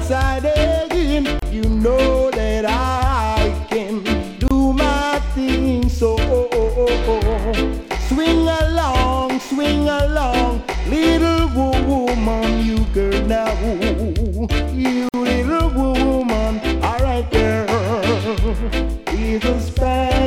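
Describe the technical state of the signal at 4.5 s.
A gap at a join of encoded pieces opens from 4.48 to 4.51 s: about 27 ms of silence where separately encoded segments meet, with encoder start delay and end padding left in. It sounds like a brief dropout before the sound resumes where it stopped. On a waveform and spectrogram it appears as a flat, empty vertical band with smeared edges.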